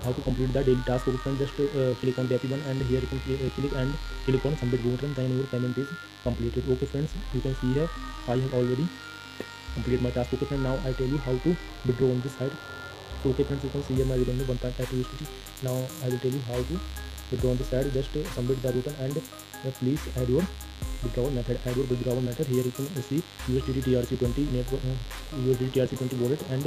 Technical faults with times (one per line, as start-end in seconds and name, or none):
0.00-26.66 mains buzz